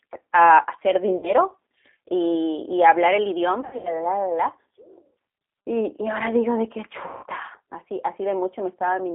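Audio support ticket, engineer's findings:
Throughout: G.729 codec. Narrow band, roughly 250 Hz to 3.6 kHz, nothing above. Speech intelligible but rough, slightly synthetic. Coding damage plainly audible. Fits G.729A at 8 kbit/s. The decoder rebuilds speech from a vocal tract filter, a pitch predictor and a few pulses per 5 ms subframe. Fine detail and highs are lost.

1.17 to 1.31 s: VoIP packet loss concealed by the speech codec. About 60 ms gone, fits three 20 ms packets. Stretched sound fading out.

3.61 to 4.00 s, just after "y hablar el": same fault. About 180 ms lost, scattered over 240 ms, longest gap 80 ms. Repeated stretched fills.

7.07 to 7.26 s, after "ahora digo de que": same fault. About 160 ms lost. Decoder extrapolates last pitch and filter, gain dropping frame by frame. Weak, distorted recovery afterward.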